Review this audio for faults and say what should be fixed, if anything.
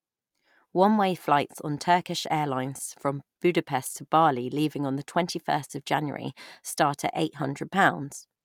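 No faults found in the speech recording, so nothing needs fixing.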